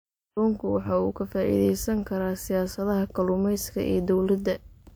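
Speech, with nothing technically wrong to hear anywhere in the clip.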